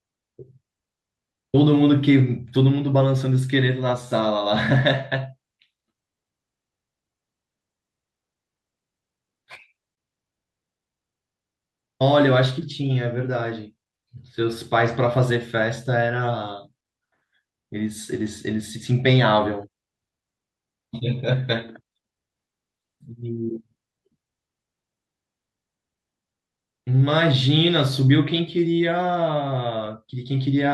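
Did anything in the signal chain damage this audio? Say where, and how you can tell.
Yes. Clock drift between sender and receiver runs through the whole speech recording. The sender's sample clock is running roughly 4 percent faster than the receiver's, so audio arrives a little quicker than it is played out and the receiver's jitter buffer keeps filling. The damage happens at the network-to-playback handoff, where two devices clocked independently never lock to a common rate.

Repeated timing corrections run from 0.12 s to 30.69 s. To keep its buffer from overflowing, the receiver repeatedly drops short slices of audio, and the net effect is playback at 104 percent of the original speed. Because the cuts all go the same way but fall at uneven intervals, the speech picks up small hiccups and a slightly rushed, unsteady pace rather than one clean speed change.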